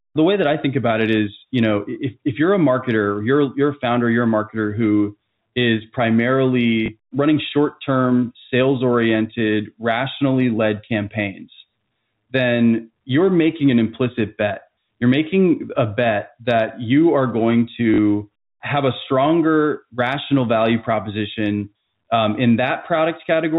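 A speech clip with packet loss and the last packet repeated. At 6.86 to 6.88 s, just before "running short term sales", a 20 ms gap is filled by replaying one packet. At 17.94 to 17.98 s, after "that you are going", 40 ms repeats, which fits two 20 ms packets. The single repeat is a small blip and the two-packet run a short robotic stutter. The G.711 telephone band is audible throughout.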